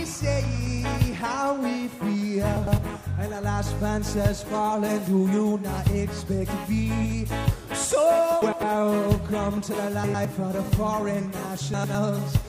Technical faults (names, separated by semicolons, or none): frames out of order